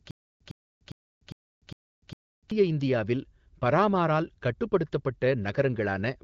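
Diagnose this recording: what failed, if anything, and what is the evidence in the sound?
Stutter with silent gaps, from 0 to 2.51 s, already under way as the clip opens. A 108 ms burst repeats six times, each followed by 296 ms of digital silence, a 404 ms cycle. This likely points to a stalled playback buffer replaying its last fragment before "இந்தியாவில் பரமாரால்".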